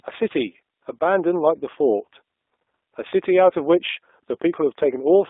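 Throughout, the speech passes through the G.729 codec at 8 kbit/s, rebuilt from a pitch predictor and a few pulses, leaving a narrow 300 Hz to 3.6 kHz band and plainly rough, synthetic speech. From 4.34 to 4.36 s, VoIP packet loss concealed by the speech codec, consistent with one lost 10 ms frame, makes the decoder extrapolate, briefly smearing the sound into a fading buzzy tone or coloured noise.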